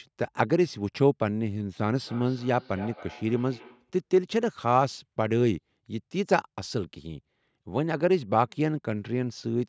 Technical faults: feedback echo between two devices

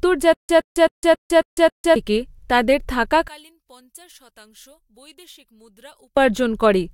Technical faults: stutter with silent gaps; one channel inverted

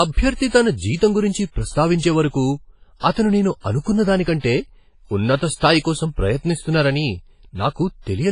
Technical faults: WMA compression

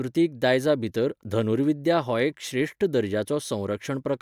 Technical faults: none

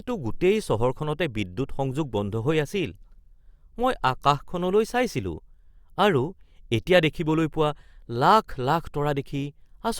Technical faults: none

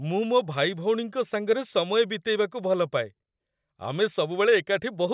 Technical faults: none

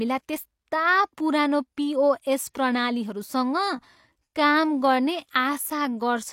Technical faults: time-stretched section

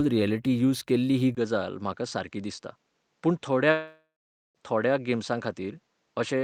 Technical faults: input switched to a poorer device; long network dropout

